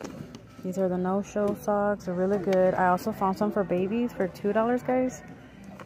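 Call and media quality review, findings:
Steady faint ticking, about ten per second, 1.44 to 4.87 s, well below the main sound. Wi-Fi interference: nearby radio's beacon every 102.4 ms picked up and rectified by the audio circuitry, leaving a regular click train.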